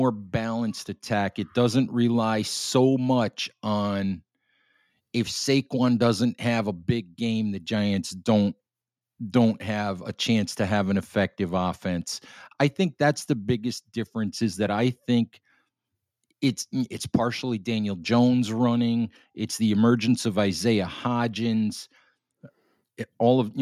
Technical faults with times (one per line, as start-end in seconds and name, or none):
none